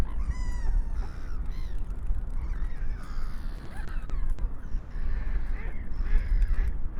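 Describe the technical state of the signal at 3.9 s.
At 3.9 s the sound is inside a stretch of repeated stalls (stutter), 3.57 to 4.41 s. Late-arriving packets drained the jitter buffer six times, and the receiver extended the last sound to fill 170 ms, longest 70 ms. Unlike dropouts, nothing is lost; the audio drags and hiccups.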